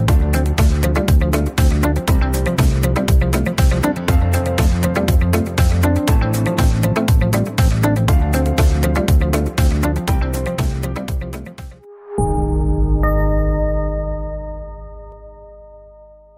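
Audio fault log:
No faults heard.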